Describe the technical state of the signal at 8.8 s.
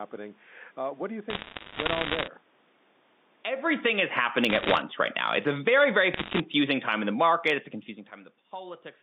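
At 8.8 s the signal is intact, with no technical fault to be heard at that moment.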